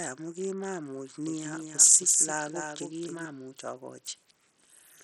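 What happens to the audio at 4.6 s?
At 4.6 s the speech is still passing through what is likely Bluetooth SBC compression, which runs through the whole clip. A starved bit pool, fitting a low rate near 64 kbps, leaves the upper sub-bands almost bitless, so treble flickers and drops out while gritty quantisation noise and aliasing roughen the sound.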